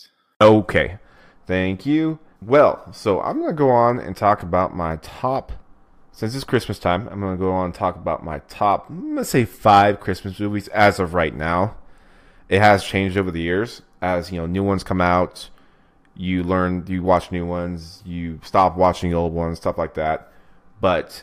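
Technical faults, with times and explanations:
No technical faults are present.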